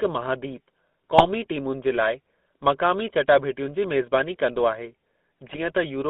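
From start to finish the speech carries the buzzy, gravelly grain of the GSM full-rate codec. It rebuilds the voice from a vocal-tract model and sparse pulse excitation, passing only about 200 Hz to 3.6 kHz. The grain is steady, unlike the brief bursts that follow.

At 1.18 to 1.29 s, and again at 5.46 to 5.60 s, GSM bit errors break through. Corrupted filter, pitch or gain values distort a few consecutive frames into squawks and gargling pops rather than dropping them to silence, as packet loss would.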